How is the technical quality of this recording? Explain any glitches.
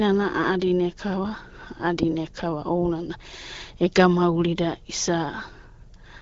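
No glitches to report: the speech carries the band-limited, lightly synthetic character of the AMR wideband (HD Voice) codec working as intended, at a quality consistent with its 12.65 kbit/s mode, where it stays clear and leaves only light traces.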